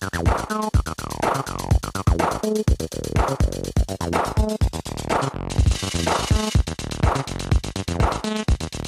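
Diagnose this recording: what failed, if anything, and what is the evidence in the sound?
Overlap-add ripple from a frame-based processing stage runs through the whole recording: level pulses about 6 dB at around 30 Hz, a rough flutter. Overlapping windows don't sum to constant gain. The waveform envelope scallops regularly; the spectrogram shows vertical banding.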